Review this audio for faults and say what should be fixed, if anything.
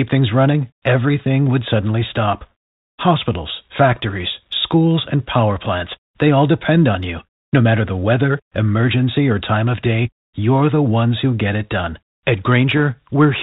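Bit errors on the ADPCM link, at around a tenth of a percent, threw the decoder's step size and predictor off track. The result is a rough, popping burst from 12.77 to 12.83 s, which fits one damaged frame. Error protection or concealment on the link would prevent it.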